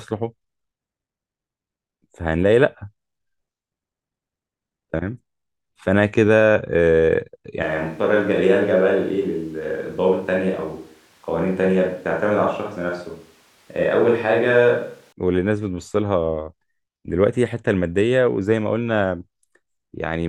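From 7.63 to 15.12 s the speech turns roomy and hollow with thinner bass, then snaps back, most likely a switch to a distant microphone. The level holds steady, and the room noise stays well below the speech; the abrupt changes at both ends distinguish this from added reverberation.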